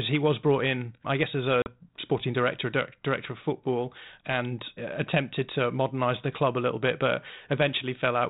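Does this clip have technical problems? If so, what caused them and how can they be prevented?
Yes. Between 1.62 and 1.83 s there is packet loss on an ADPCM call: about 40 ms, roughly two packets, drops out as a hard-edged silence. Unlike a dropout in plain PCM audio, the sound does not resume cleanly. It comes back slightly distorted, because the decoder's adaptive predictor and step size no longer match the sender's. It settles once they re-converge. Carrying the 32 kbit/s G.726 stream over a link with forward error correction or redundant packets, plus loss concealment that resets the decoder state, would prevent it.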